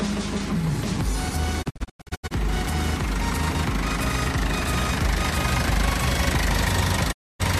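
From 1.61 to 2.33 s a digital broadcast dropout punches several short holes in the sound, none longer than 96 ms; another silences 7.11 to 7.41 s. Losing valid frames, the receiver muted with 20 ms fades, leaving flat waveform gaps and blank vertical spectrogram bands.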